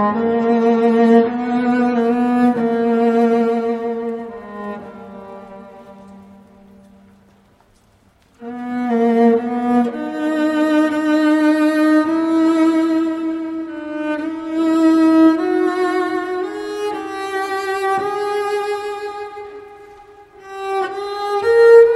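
From 0.0 to 2.0 s the audio is band-limited with nothing above 11.2 kHz and noticeable codec smearing, consistent with an adaptive stream starting at a low bitrate, roughly 32 kbit/s MP3. At 2.0 s it steps up, apparently to 128 kbit/s, without a gap, restoring treble.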